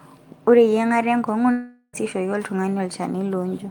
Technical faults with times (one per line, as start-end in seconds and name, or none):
1.51-1.96 long network dropout